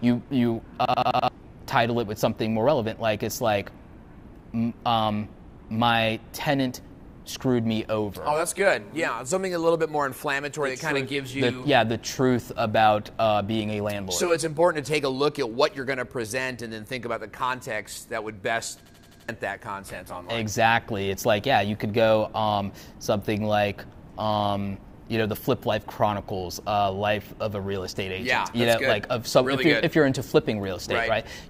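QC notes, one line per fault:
0.85–1.28 s: system hang loop. An 85 ms slice of audio repeats exactly five times at about 11.7 Hz, giving a machine-gun stutter. The system stalled while the hardware kept replaying its ring buffer, consistent with a 4096-sample buffer. Roughly 0.4 s of audio is lost.
18.86–19.29 s: system hang loop. The same fault recurs: an 85 ms segment cycles five times at 11.7 Hz, producing a rapid stutter in place of new audio. The loop length again fits a 4096-sample buffer replayed during the freeze, and about 0.4 s is missing.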